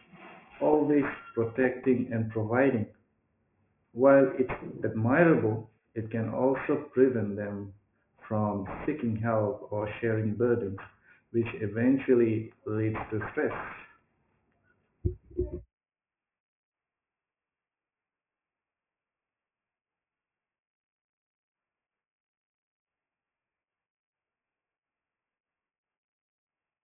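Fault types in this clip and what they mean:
aliasing: Across the whole recording the speech sounds gritty and metallic, with s and sh sounds turned into harsh, wrong-pitched hiss, and the spectrum runs hard up to a ceiling at 3 kHz. The sample rate was lowered without first removing what lay above half the new rate, which fits a drop from 48 kHz to 6 kHz, so that content folds back below 3 kHz, roughly 20 dB under the speech.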